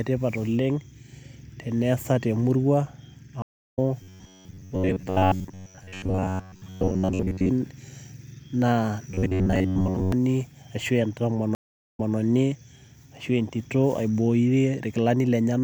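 At 3.42 s a stream reconnect breaks the speech. The connection drops, playback stops, and a fresh decoder picks up mid-stream, so after about 305 ms of silence the speech resumes roughly a fifth of a second further on, leaving a small gap in the content. The speech comes back in through a brief muted or faded onset and is running again by 3.79 s.

From 4.03 to 7.49 s, and again from 9.11 to 10.12 s, there is robotic sound from repeated short buffers. New audio is likely arriving too seldom, so playback loops the last short slice, around 10.7 ms long, while most of the real signal, roughly two-thirds or more, is skipped. That looping imposes a fixed 93.8 Hz buzz, and the speech becomes a stiff, metallic drone that only loosely follows the original.

A second stream reconnect runs from 11.55 to 12.16 s. After about 389 ms of silence the stream restarts 216 ms earlier than where it cut off, so a short stretch of speech plays twice.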